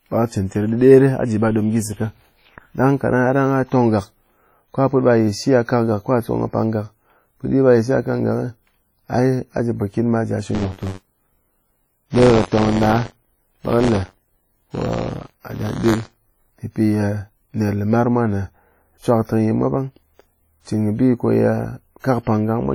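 Throughout the speech there is heavy codec damage: ringing, washy smearing, and a hiss that breathes with the signal, likely from WMA compression at about 32 kbps. Its long transform blocks spread noise across tens of milliseconds rather than producing short metallic twitter.

From 10.54 to 16.54 s, buffer tearing adds a robotic buzz at 93.8 Hz, which fits a 512-sample buffer. Writer and reader cross inside each period, so a small slice of audio from roughly 40 ms earlier is spliced in, and the rattle is present only with signal.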